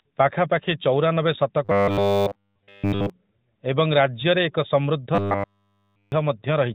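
Robotic sound from repeated short buffers runs from 1.65 to 3.10 s, just after "ପାଖାପାଖି ଚଉରାନବେ", and again from 5.15 to 6.12 s, after "ଏବଂ ରାଜ୍ୟରେ ଏକ ସମୃଦ୍ଧ". The speech collapses into a rigid, metallic buzz at 100 Hz, which points to a fragment about 10 ms long being looped. The likely cause is audio arriving too seldom, so playback fills the whole gap with repeats while the real speech is skipped. Both passages sit within narrowband mobile-codec audio that passes nothing above 4 kHz.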